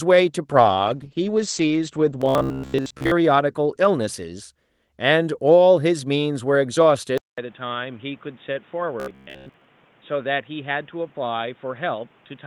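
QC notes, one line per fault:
0.53–4.73 s, call bitrate drop: the sound turns rough and watery and loses its top end, at its worst for about 1.1 s. The encoder falls from 40 to 11 kbps, coding more coarsely and narrowing the band from 20 kHz to 8 kHz.
2.22–3.12 s and 9.00–9.65 s, robotic sound from repeated short buffers: a rigid, metallic buzz at 66.7 Hz rides on the sound and follows it only loosely. This is likely from late audio being covered by repeating the last 15 ms over and over, replacing most of the real signal.
7.18 s to end, input switched to a poorer device: after a 200 ms silence the sound comes back duller and boxier, roughly 10 dB quieter, with a new noise floor about 30 dB down. This is likely a change to a narrower-band microphone or headset profile.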